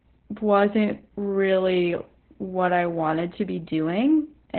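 From start to finish the speech carries heavy Opus voice compression. Nothing is present above about 4.3 kHz, so the codec has dropped to narrowband, and the result sounds muffled, hoarse and somewhat robotic. That combination points to the SILK linear-prediction coder running at a very low bitrate, around 8 kbps, where the spectral envelope is kept but the excitation is coded coarsely and the upper band is given up entirely.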